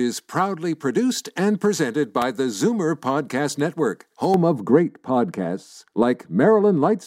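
A sharp snap cuts across the speech at 2.22 s, just after "proudly produced and presented". It is an electrical switching spike, likely a nearby switch, motor or static discharge arcing briefly and coupling into the audio line.

From 4.34 s to the end, the speech turns dull and muffled, losing its crispness. This is de-emphasis applied wrongly: a treble-cutting filter acted on audio that needed no correction, tilting the response smoothly downward to about 11 dB lower at 10 kHz than at 1 kHz.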